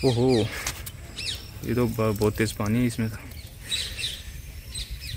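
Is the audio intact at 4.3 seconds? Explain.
No. A call bitrate drop runs from 2.78 s to the end at 5.16 s, bottoming out for 1.8 s. The muffled, watery sound fits an encoder pushed from about 96 kbps to around 19 kbps. Unlike packet loss, nothing drops out.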